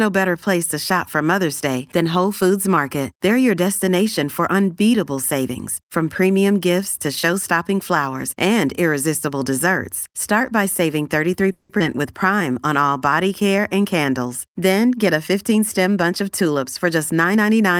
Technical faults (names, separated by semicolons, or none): call audio freeze; skip ahead; jitter buffer slow-down; jitter buffer speed-up